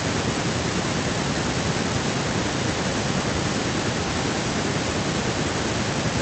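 No technical faults can be heard anywhere in this recording.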